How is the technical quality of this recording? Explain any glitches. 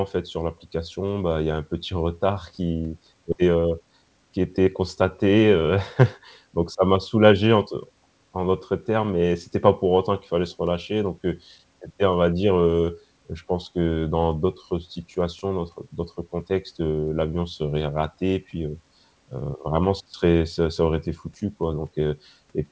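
The recording has two short glitches close together early on, both on the call path. The G.722 codec is audible as a cap at 8 kHz.

At 3.32 s there is a skip ahead. Roughly 0.7 s of speech was discarded while later audio was already queued, so playback jumps straight to the later material with no filled gap. Unlike a dropout, there is no silence or concealment noise, only an abrupt join where speech goes missing.

From 3.41 to 4.68 s there is a jitter buffer speed-up. The buffer was holding excess delay, so the receiver repeatedly cut out short pitch-period pieces, about 150 ms in total, and the speech runs at 112% of its normal rate. It sounds briefly hurried at unchanged pitch, which distinguishes it from a simple fast playback that would also raise the pitch.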